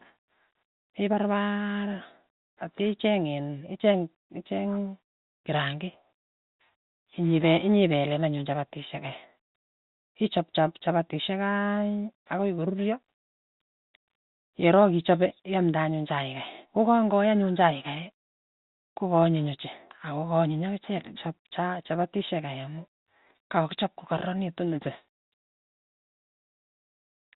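Nothing here needs fixing: it's a speech recording carried over ordinary G.711 telephone coding, so it has the usual narrow phone-line sound with nothing above about 4 kHz.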